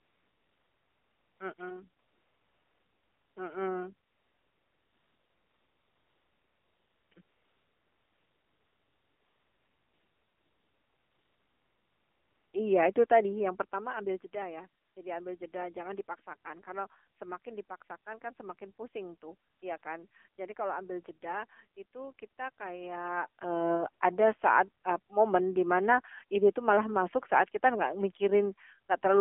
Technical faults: AMR narrowband mobile codec; AMR comfort noise

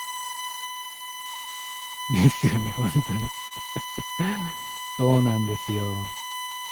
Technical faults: USB whine; short concealed packet loss

